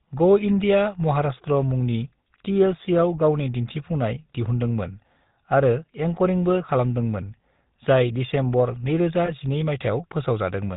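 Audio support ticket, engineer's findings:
GSM full-rate codec, whole clip: buzzy, gravelly roughness on speech, plainly audible, no content above 4 kHz. The vocal-tract model is excited by regular pulses using only every third excitation sample; the character fits 13 kbps GSM full rate.

Lost GSM frames, 9.26–9.30 s: brief rough, metallic ring in the speech. The decoder held the last good frame's parameters to conceal the gap, which fits a single lost 20 ms frame.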